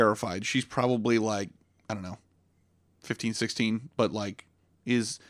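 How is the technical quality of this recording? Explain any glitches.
No glitches turn up in this one; there's nothing in the recording that stands out as a technical fault.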